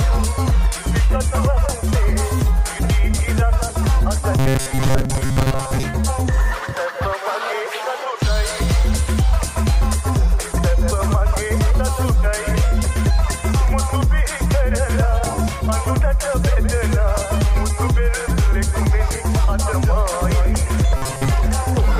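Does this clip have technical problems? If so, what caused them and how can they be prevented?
Yes. Robotic sound from repeated short buffers occurs at 4.39–5.83 s and 20.97–21.28 s. A rigid, metallic buzz at 133 Hz follows the sound only roughly. Most of it is repeated. It is likely a 7.5 ms block looped while new audio arrived late. Larger buffers prevent it.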